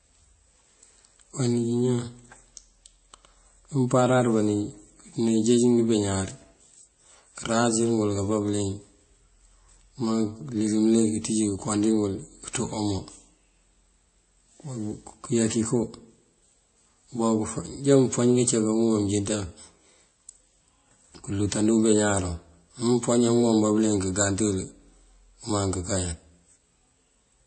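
Throughout, nothing sounds above 8.3 kHz and two different artefact textures overlap, unlike one codec's single grain: likely transcoding between lossy codecs, fitting low-rate MP3 re-encoded as WMA.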